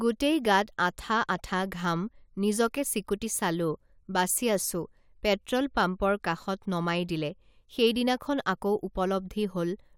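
No technical faults can be heard anywhere in the speech recording, which comes through as a continuous, intact signal.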